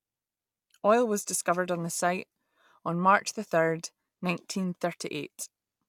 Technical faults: none

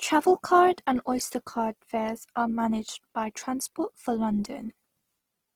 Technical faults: Opus compression

